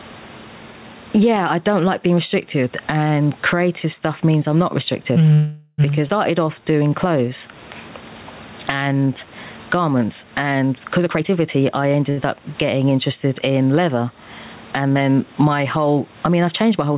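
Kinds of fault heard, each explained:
Gain pumping: Throughout the speech, background noise swells in the pauses and ducks by around 15 dB whenever the talker gets loud, squashing the dynamics. The likely cause is microphone gain set far too high, with a fast limiter clamping it. Room noise alone would stay at a constant level.
Call audio freeze: Right after "means I'm not restrictive", from 5.33 to 5.81 s, the last sound is held as a fading buzz or hiss for about 450 ms, likely because delayed packets left the jitter buffer empty. Speech then resumes where it stopped, so nothing is lost, unlike a skip.
Skip ahead: At 6.08 s playback jumps forward, dropping roughly 200 ms of speech and joining the two sides almost directly with a gap of only about 9 ms. Unlike a freeze or stall, nothing is held or stretched here. Audio is simply missing.
Jitter buffer slow-down: From 6.31 to 7.53 s (90% speed, 132 ms added) and from 8.76 to 9.27 s (89%, 62 ms added, ending just before "garments and"), repeated pitch periods draw the speech out at unchanged pitch. 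It is a gradual stretch, not a single held sound like a stall.
Jitter buffer speed-up: After "garments and", from 11.00 to 12.00 s, speech runs at 123% speed with the pitch unchanged. Roughly 200 ms is trimmed out in many small pitch-period cuts, making it sound hurried. This differs from a skip ahead, which removes one block in a single jump.
Short stall from a late packet: At 12.1 to 12.2 s one sound is held about 70 ms too long, with a slight buzz or dip, while a packet arrives late. Speech continues from the same point with nothing missing. It is much briefer than the 450 ms freeze.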